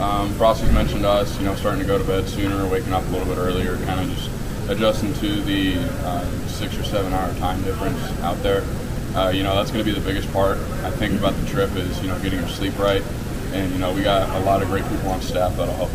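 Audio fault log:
throughout, low bit depth without dither: a grainy, gritty distortion rides on the sound and changes with it, only about 20 dB below the signal. The likely cause is undithered rounding to very few levels, which fits roughly 6-bit resolution, so the error tracks the waveform.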